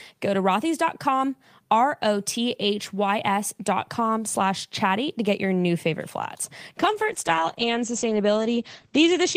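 At 6.8 s, just after "your new favorite flats", the call bitrate drops. The connection's bandwidth estimate fell, so the encoder was told to spend far fewer bits. The quality change fits a fall from about 32 kbps to about 11 kbps. Coding turns coarse and rough. The top end is cut, with the audio band shrinking from 20 kHz to 8 kHz. The speech sounds muffled. It stays degraded to the end of the clip at 9.36 s.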